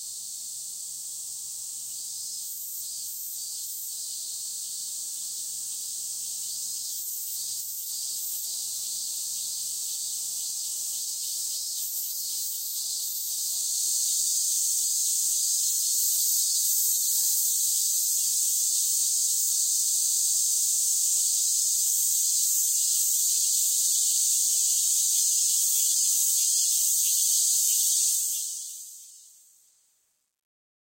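Truncation distortion on a fade runs from 28.09 s to the end at 30.84 s. The fade-out itself begins around 28 s, but the level stage behind it keeps only about 10 bits and adds no dither, so as the signal shrinks toward the smallest step the waveform collapses into coarse square stairs. From 28.76 s onward the tail turns gritty instead of fading cleanly.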